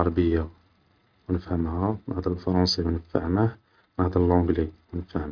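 No technical faults can be heard anywhere in this speech recording. There is no moment that calls for a timestamp or an explanation.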